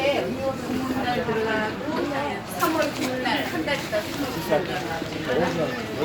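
No technical faults are audible anywhere in this audio.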